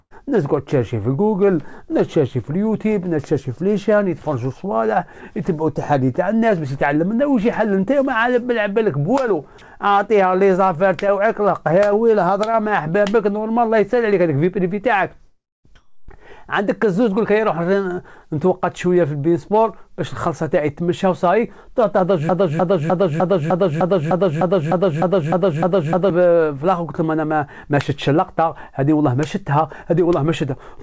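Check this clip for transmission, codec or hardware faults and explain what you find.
Three faults are audible, clustered from about 15 s onward, on top of a call-codec path whose band stops at 8 kHz, consistent with G.722.

Long network dropout, 15.26 to 15.67 s: packets stopped arriving, likely from a network interruption, so the receiver stretched the last sound for a moment before it faded into silence. Roughly 0.39 s of audio is simply missing when the sound resumes.

Comfort noise in place of the background, 15.76 to 16.09 s: the sender's discontinuous transmission likely halted real audio, and the receiver substituted synthetic noise. For about 0.33 s the background, sitting about 35 dB below the loudest sound, turns flat and featureless, shifting level by about 1 dB.

Broken-record loop, 22.29 to 26.1 s: the stream stalled, likely in the player or encoder, and kept resending its last buffered fragment. 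A 0.30 s slice repeats back to back 13 times, and the audio that belonged in those seconds never plays.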